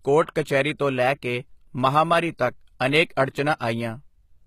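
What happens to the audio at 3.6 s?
Pre-echo: from 3.56 to 3.61 s, a 46 ms wash of hiss arrives just before a sharp attack in the speech. The codec spread quantisation noise sized for the loud onset across its whole block, including the quiet lead-in. Unlike reverb or an echo, this smear comes before the attack, not after, and is noise rather than a repeat.

This happens against plainly audible HE-AAC compression, likely at a bitrate around 20 kbps. The treble up to 14.9 kHz is rebuilt from copied lower bands, so its harmonics don't line up with the originals. Unlike a plain low-pass cut, treble is still present, but it is synthetic rather than original.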